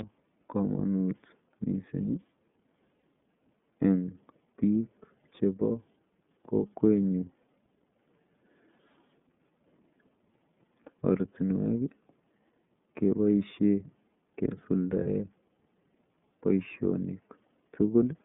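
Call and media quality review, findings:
iLBC codec, throughout. Speech confined to about 150 Hz–3.5 kHz, nothing above. Plainly audible rough, slightly synthetic texture from per-frame excitation coding with no reliance on earlier frames. Character points to the 13.33 kbps, 30 ms frame mode.

Lost iLBC frames, at 3.00 s and 15.03–15.07 s. Brief held, faintly buzzy vowel-like fill where the decoder repeats the last pitch cycle mixed with noise, each gap fitting a single 30 ms frame. Voice recovers immediately, since frames decode independently.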